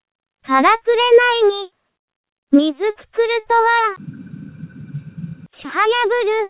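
No technical faults can be heard anywhere in this clip. The audio has passed through a call path whose narrowband character, with nothing above 4 kHz, fits G.711 mu-law at 64 kbps.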